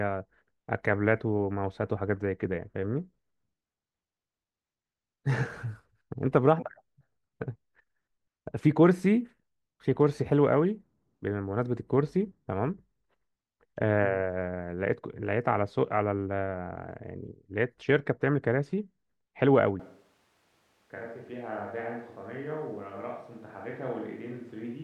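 At 19.80 s the speech suddenly turns roomy and hollow, with thinner bass. The level drops by about 10 dB. Room noise sits only about 30 dB below the speech. This is likely a switch to a distant microphone, and it continues to the end.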